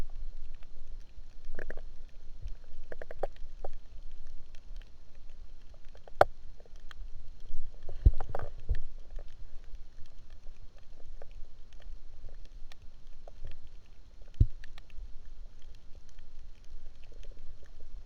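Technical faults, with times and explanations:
Throughout, crude rate conversion: unfiltered repeated samples, fitting 44.1 to 48 kHz, add inharmonic fizz about 45 dB down, shown as stray spectrogram lines.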